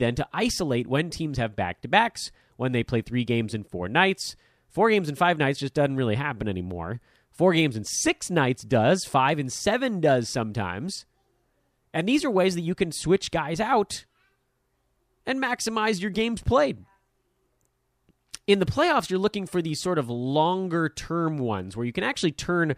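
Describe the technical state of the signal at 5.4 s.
Around 5.4 s the speech signal is intact, with no technical fault audible at that moment.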